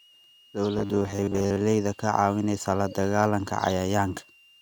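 Throughout the speech, a faint switching supply whistle drifts between 2.76 and 2.93 kHz, roughly 30 dB below the voice, and shows as a thin wavering horizontal line near 3 kHz.

From 0.79 to 1.57 s the voice becomes a rigid metallic 100 Hz buzz. This is likely robotic sound from repeated short buffers, with about half the audio replaced by repeats of 10 ms chunks. On a spectrogram it appears as evenly spaced harmonic stripes, and the waveform shows identical blocks.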